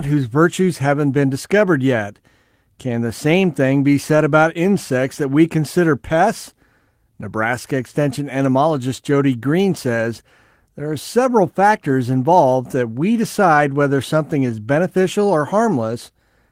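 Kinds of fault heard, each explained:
No technical faults are audible in this recording.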